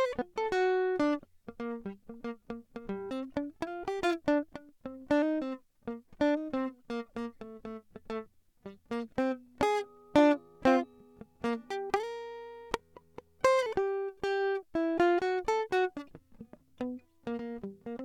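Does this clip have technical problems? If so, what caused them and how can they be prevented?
Yes: compressed frames skipped at 1.55, 3.10 and 17.38 s. The music jumps ahead roughly 150, 300 and 100 ms. Preventing it means verifying file integrity and re-encoding or re-transferring damaged files.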